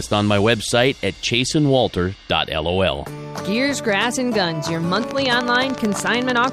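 From 4.96 s to 6.45 s a steady ticking rides over the sound, in pauses too: a train of clicks, about twenty evenly spaced pulses at 13.5 per second, peaking roughly 15 dB above the signal. The likely cause is interference or a faulty connection or power supply injecting repeated pulses.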